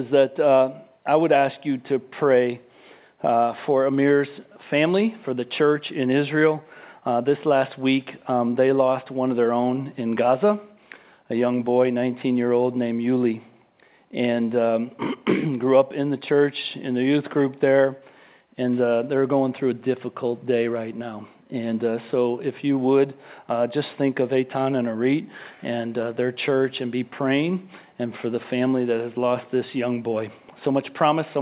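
No technical faults are audible.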